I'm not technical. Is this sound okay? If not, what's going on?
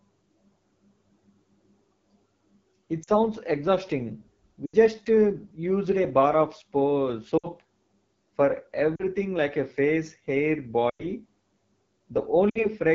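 No. Two things are wrong.

First, the call used the AMR wideband (HD Voice) codec at one of its lowest-quality settings. The system squeezes the speech into very little data by rebuilding the voice from a simplified model of the throat and mouth, and filling the highest frequencies with shaped noise. At a setting this low, the model can't keep up, so the speech sounds rough and raspy all the way through.

Second, there are lost AMR speech frames. Radio errors damaged small chunks of the signal, and the phone couldn't use them. It filled each gap by repeating the last good sound and fading it down. You hear the sound briefly drop to near silence at 3.03 s (about 40 ms), 4.66 s (about 80 ms), 7.37 s (about 60 ms), 8.95 s (about 40 ms), 10.89 s (about 100 ms, the longest) and 12.49 s (about 60 ms). Right after each gap, the speech returns weak or rough for a moment.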